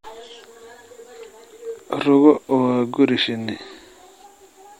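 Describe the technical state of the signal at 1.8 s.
At 1.8 s the speech signal is intact, with no technical fault present at that moment.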